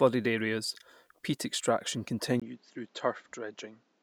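A speech recording whose input appears to switch to a poorer device at 2.40 s, just after "areas peat extraction", and stays there to the end at 4.02 s. A 20 ms gap marks the switch, and the sound turns duller and quieter, dropping about 5 dB, with new background noise roughly 35 dB under the speech. The likely cause is the system changing microphones mid-recording. On a spectrogram, everything above 7.6 kHz vanishes at that point. The waveform shows a brief flat gap and then a smaller envelope.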